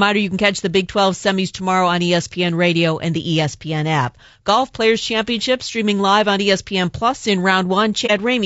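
Low-delay AAC compression runs through the whole of this speech recording, and the codec damage is plainly audible: the sound is rough and grainy, with noise filling the gaps between harmonics. This is likely AAC-ELD at a rate that fits about 32 kbps, whose short low-delay frames leave too few bits per line. AAC frame loss with muting appears from 8.06 to 8.11 s as a brief dip. A frame's worth of audio, about 30 ms, was zeroed by the decoder, and the overlapping windows fade the sound out and back in around the gap.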